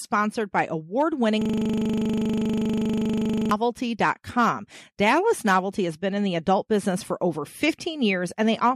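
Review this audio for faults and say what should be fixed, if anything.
A system hang loop runs from 1.42 s to 3.51 s. The speech stops moving forward and one 40 ms slice repeats, about fifty times over. At 25 repeats per second it becomes a rough, steady buzz rather than a stutter. The computer or audio driver stalled, but the sound hardware kept replaying the same short ring buffer. To prevent it, fix the stall in the audio thread and mute the output when the buffer stops being refilled.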